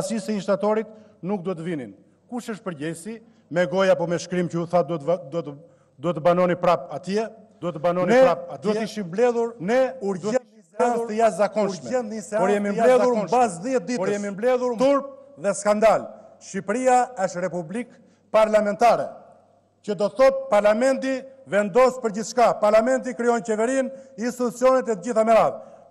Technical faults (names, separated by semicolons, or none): doubled audio track; audio dropout to a faint residue